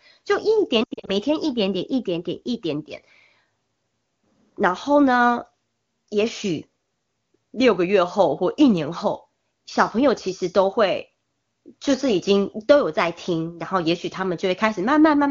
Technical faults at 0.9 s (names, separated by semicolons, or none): lost AMR speech frames